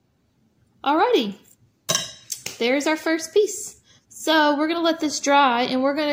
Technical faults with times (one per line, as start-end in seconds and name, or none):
none